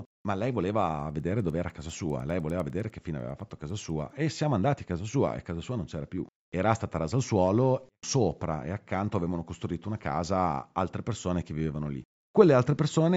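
From 0.9 s to 4.1 s, after "ma lei" and until "e siamo andati a", the speech carries a steady train of faint ticks at 10 Hz. This is a resampler restarted on every block. Each block was converted on its own, so its edges lacked the real neighbouring samples. That leaves a small error at every boundary. The 10 Hz rate fits 100 ms blocks. The sound suggests an upsampling step, plausibly 16 kHz to 48 kHz. The ticks follow the signal.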